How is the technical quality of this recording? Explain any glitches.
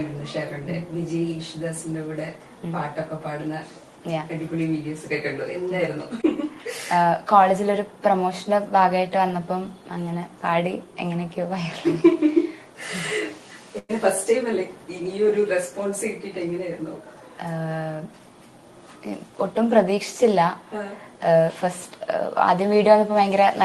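The recording has two audible dropouts from a network call path, heard through codec sound whose top end stops near 12 kHz, which fits a call codec at a modest bitrate.

At 6.21 to 6.25 s there is a brief smear where about 20 ms of sound went missing. This short concealed packet loss was patched by extending the preceding audio.

At 13.79 to 13.91 s the sound stretches, fades, then drops into about 20 ms of silence. A burst of packet loss removed about 100 ms of audio.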